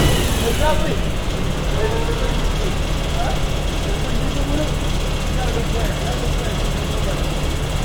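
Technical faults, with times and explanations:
No technical faults detected anywhere in the audio.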